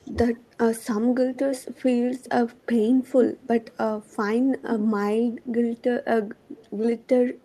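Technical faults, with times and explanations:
0.00–0.66 s, speech suppressed in double talk: the talker's level dips by as much as about 20 dB in short bites adding up to around a fifth of a second, so the opening sounds clipped and uneven. This is likely an echo canceller hearing both sides at once, failing to tell the near talker from loudspeaker echo, and pulling its gain down on everything, the wanted voice included.
0.04–0.55 s, 1.35–1.82 s, 2.54–2.66 s, 3.37–4.09 s and 5.42–7.45 s, echo leak: a repeat of the voice trails it by 263 ms each time. It is barely audible at about 35 dB below the speech at first, prominent at about 10 dB down around 1.35–1.82 s, and about 25–30 dB down elsewhere. The fixed lag points to the far end's loudspeaker feeding its microphone, with that echo canceller likely leaving residue that travels back down the line.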